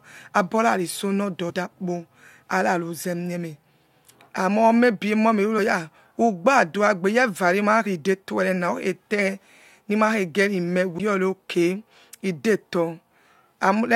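Damaged data in a compressed stream causes four short blips in the speech. The first runs from 1.49 to 1.51 s. The second falls at 5.58 s, just before "ha ugbadua". The third is at 7.85 s. The last is at 10.99 s, right after "nimakhejieri me". At each point, bytes in the coded stream were wrong. The decoder misread those frames and lost sync until the next clean frame header. Each fault is brief, lasting about 14 to 22 ms.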